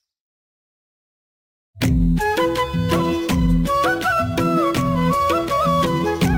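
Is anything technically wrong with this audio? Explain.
Yes. Throughout the clip there is imaging from sample-and-hold upsampling. Each original sample was simply repeated with no smoothing filter, which fits a rate near 22 kHz raised to 48 kHz. A mirrored copy of the spectrum fills roughly 11 to 22 kHz at about 24 dB below the signal. It is heard as a bright metallic fizz that tracks the level of the sound. On a spectrogram, the lower band appears reflected above 11 kHz. Zoomed in, the waveform shows small flat steps.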